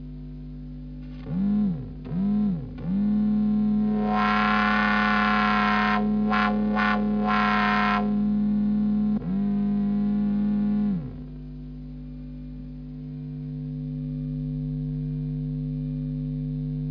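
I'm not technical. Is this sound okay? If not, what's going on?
No. Aliasing runs through the whole clip. The audio was squeezed down to a much lower sample rate, which fits a drop to about 11 kHz, without first removing the highs that rate can't hold. Everything above about 5.5 kHz didn't just disappear. It folded back down as false, unrelated tones. That is why crisp, bright parts of the sound come out gritty and metallic, with a faint harsh haze mixed in underneath.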